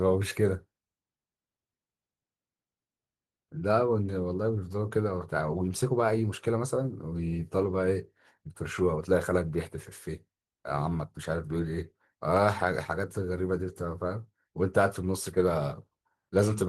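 Nothing's technically wrong with this speech clip; it's carried over Opus voice compression at a modest rate, and there's no fault to point to anywhere in it.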